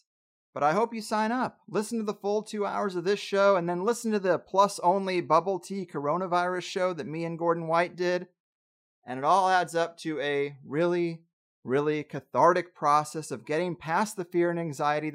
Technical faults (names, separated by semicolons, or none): none